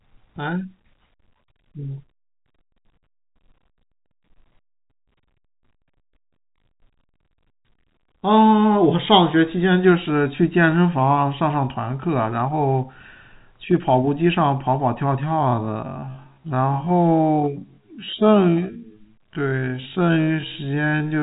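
From 15.22 s to the end, the speech slows abruptly to about half speed, 0.504 times, in a time-stretched section. Pitch stays unchanged. It drags, likely from software repeating short pieces to lengthen the audio. The telephone band stops near 3.8 kHz throughout.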